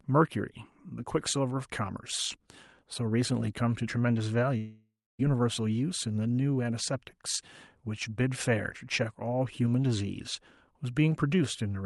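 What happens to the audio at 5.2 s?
At 5.21 s the speech returns after a gap. From 4.57 s the last sound is stretched into a fading buzz, then about 0.27 s of silence, and roughly 0.6 s is simply gone, most likely a long network dropout that the receiver papered over.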